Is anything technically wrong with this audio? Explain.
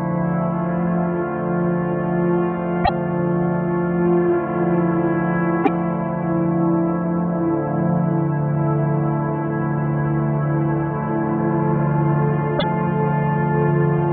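Yes. At 2.84–2.89 s, 5.63–5.69 s and 12.58–12.64 s the audio jumps ahead with a glitch of roughly 56–58 ms, about two 26.1 ms frames, likely a broken MP3 bit reservoir: after lost frames, the decoder's backward lookup read another frame's data.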